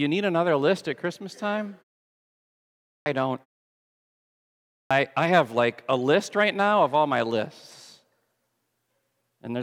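At 3.01 to 3.06 s and 4.85 to 4.91 s, each after a pause of 1.3 to 1.5 s, the output path wakes late. The clipped start after a pause swallows about 50 ms and 56 ms of onset, so "I have like a" begins abruptly, with the waveform jumping straight out of flat silence and no spectrogram energy for its first sound.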